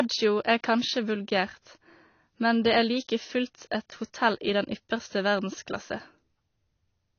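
All the way through, the speech is dull and cut off above about 6.6 kHz, with plainly audible smearing, most likely AAC compression at a low bitrate around 24 kbps.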